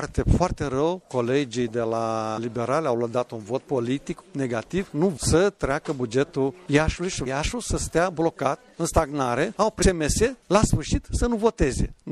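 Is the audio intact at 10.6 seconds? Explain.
No. At 10.6 s, as throughout, the audio sounds watery and swirly. The likely cause is MP3 compression at a low bitrate, around 64 kbps, which drops weak frequency lines.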